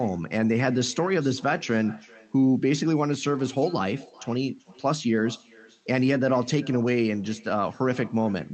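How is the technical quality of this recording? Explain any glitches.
The recording carries one persistent fault, an echo with no canceller, heard across the whole clip over a call path whose audio stops at around 8 kHz.

Echo with no canceller: throughout, each phrase returns about 25 dB quieter and roughly 0.4 s later, because the far end's loudspeaker fed its microphone and nothing subtracted it. Unlike room reverberation, which smears into a continuous tail, this is a distinct, thinner repeat arriving after a clear gap.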